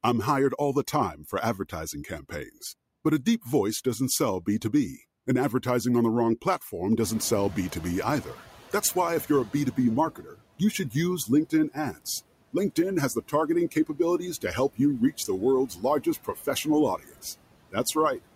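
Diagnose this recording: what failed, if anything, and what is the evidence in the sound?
The background sinks between phrases and swells under speech throughout. These are noise suppressor artifacts in call processing, cutting steady noise by about 18 dB.

Consonants and word endings sound swallowed at 0.92–2.63, 10.16–10.95, 11.26–12.06, 13.71–13.99, 15.68–16.66 and 16.98–17.24 s, dropping up to about 16 dB. This is speech cut by the noise suppressor, which misread it as noise.

After "on the wrong platform", the room noise jumps about 21 dB near 7.0 s and passes with less reduction at first, sinking by 10.02 s. This is the noise suppressor catching up, its estimate adapting over 2.99 s to an 11 dB cut.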